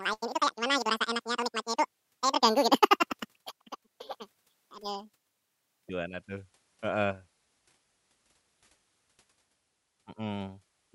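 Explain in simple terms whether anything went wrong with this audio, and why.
From the start to about 5.89 s there is a wrong sample rate fault. The speech runs twice as fast and a full octave higher, which fits 24 kHz audio played at 48 kHz.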